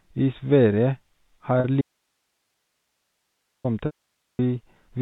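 At 1.6 s a brief buzzy hold of about 40 ms is heard: packet loss with pitch repetition, where the receiver repeated the last pitch period to cover the missing audio. From 1.81 to 3.64 s the sound cuts abruptly to faint hiss far below its normal level for 1.83 s, then returns mid-flow. This is an audio dropout to a faint residue, likely the wanted signal lost while the path after the break stayed live. From 3.86 to 4.39 s a 530 ms gap of packet loss with pitch repetition briefly holds a buzzy tone, fades to silence, and the sound returns with a short cross-fade. The narrow telephone band of the G.711 coding stays audible throughout.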